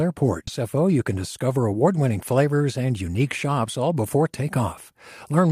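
At 0.47 s the speech skips ahead: roughly 0.7 s of audio is gone, and the two sides of the cut are joined directly with no fill. This is a late-stage drop, where a block of queued audio was discarded, either in transit or because the jitter buffer overflowed while newer packets were already waiting. The listener hears an abrupt jump forward in the sentence with no pause to mark it, and playback arrives about 0.7 s closer to real time.

From 0.61 s to 2.17 s, leading into "flavors and unique shops", a jitter buffer speed-up plays the speech about 8% fast. The receiver was holding more audio than its target delay, so it removed many short pitch-period-length segments in succession, around 150 ms in total, to drain the excess. Pitch stays unchanged, but the delivery sounds slightly rushed through that stretch.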